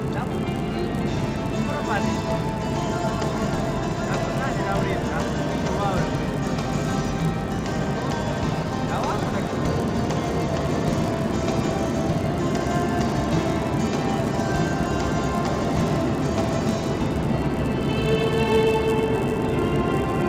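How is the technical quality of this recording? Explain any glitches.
The quality is impaired by one fault. A resampler restarted on every block runs throughout, likely a 16 kHz to 48 kHz conversion in 10 ms blocks. Each block edge carries an error, giving a 100 Hz buzz heard only with signal.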